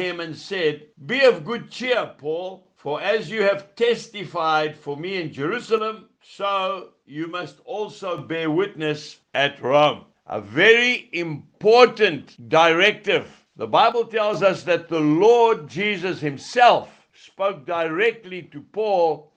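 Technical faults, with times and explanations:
1.95–2.65 s, 5.78–8.18 s, 13.92–14.34 s and 17.17 s to the end: one channel drops out. Each time the level falls abruptly by about 6 dB, returning just as suddenly except in the final stretch. The likely cause is one stereo channel going silent, so the mono sum keeps only half of the shared sound.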